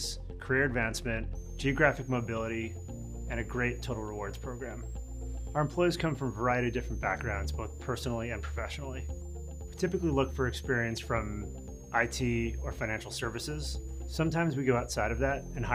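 From 1.35 s to the end, a switching supply whistle sits above the sound. A switching power supply is running in an audible burst mode or beating with another one. The high tone wanders between about 5.8 kHz and 7.6 kHz, mostly near 7 kHz. It stays roughly 25 dB below the signal.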